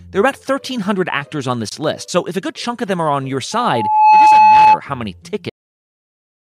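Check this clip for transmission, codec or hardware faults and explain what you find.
The clip has three faults: a gap at a join between encoded pieces, a loudspeaker feedback squeal, and a cut-off end.

From 1.69 to 1.72 s there is a gap at a join of encoded pieces. Two separately encoded pieces were spliced without trimming the encoder's start-up delay and end padding, so that filler stays in the stream. The speech breaks for a 24 ms gap with smeared edges, so the truly silent part is shorter, then resumes exactly where it left off.

From 3.52 to 4.79 s there is a loudspeaker feedback squeal. A microphone was picking up the loudspeaker it fed, and at 860 Hz the loop gain rose above one, so that frequency fed itself. Over about half a second a single 860 Hz tone swells into a squeal, ending roughly 15 dB louder than the speech.

The clip has a cut-off end at 5.50 s. The final buffers were never written, so playback stops in the middle of the sound. 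Instead of trailing away naturally, the speech falls abruptly into digital silence with no decay, and that silence runs to the end of the file.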